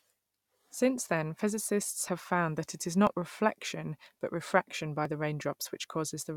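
At 2.08, 3.07, 4.06 and 5.05 s, tiny skips interrupt the speech, the second just after "found that it is". They come from overlap between stream segments: overlapping one-second segments get trimmed, dropping a few milliseconds each time.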